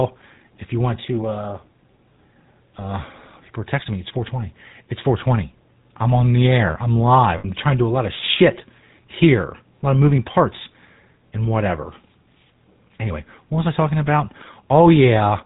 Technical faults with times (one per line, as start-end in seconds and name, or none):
0.00-15.46 GSM full-rate codec
7.38-7.46 lost GSM frames